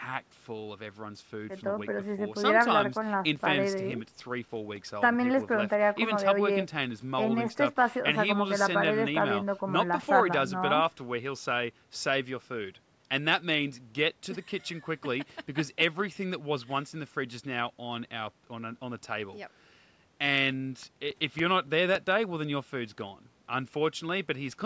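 From 2.5 to 5.0 s and again from 20.3 to 22.2 s, there are CD scratch ticks. A blemish beat the error correction on each disc turn, leaving about four brief ticks a second of uneven strength.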